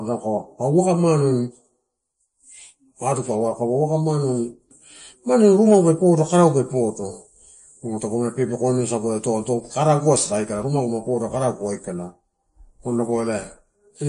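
From start to finish the speech carries plainly audible MP3 compression. Nothing is left above about 10.6 kHz, and the tone is watery and swirly, which points to a low bitrate of around 40 kbps as the likely cause. That swirl sets it apart from a plain low-pass filter.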